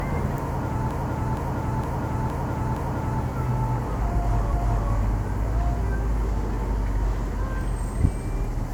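From 0.91 to 3.23 s, the audio stutters. A 0.46 s block plays again five extra times, which fits a run of about five compressed frames sent repeatedly. These are repeated frames. The decoder simply replays the same stretch, so the clip grows by 2.32 s. At 4.53 s it happens again. A 0.37 s block, likely four frames, repeats once and ends at 4.90 s. That adds 0.37 s more.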